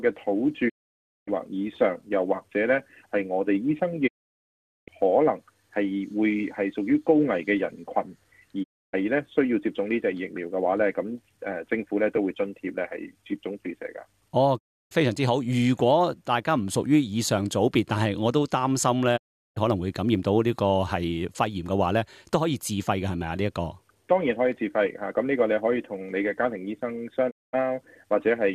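Digital broadcast dropout hits six times, at 0.68–1.29, 4.06–4.89, 8.62–8.95, 14.57–14.93, 19.16–19.58 and 27.29–27.55 s. Each time the receiver loses good frames and mutes with a quick 20 ms fade, so the sound vanishes completely.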